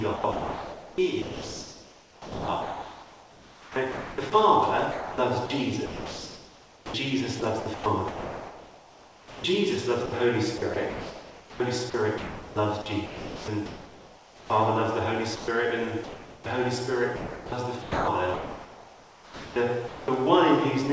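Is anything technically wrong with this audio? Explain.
Yes. Across most of the clip the audio is repeatedly cut out by a voice detector, in two distinct ways.

Sound chopped by the voice detector occurs from 0.16 to 4.32 s, 4.92 to 9.44 s, 10.06 to 14.50 s and 17.16 to 20.08 s. Within these stretches, roughly 3.4, 2.9, 2.5 and 2.0 s of sound respectively are swapped for synthetic hiss. The likely cause is a sender-side detector repeatedly flipping between transmitting and muting, with the receiver filling the gaps with comfort noise. The result is choppy, gated audio.

Sound dropped by the voice detector appears as two shorter gaps. From 15.36 to 15.48 s, 120 ms of sound is lost and replaced by steady noise. From 16.04 to 16.46 s, 420 ms is filled, covering about 160 ms of lost sound. Here the detector likely judged quiet material to be background and stopped sending altogether. The sound gives way to flat comfort noise and resumes when transmission restarts.

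The call path itself carries nothing above 8 kHz, consistent with G.722 at a 64 kbps rate.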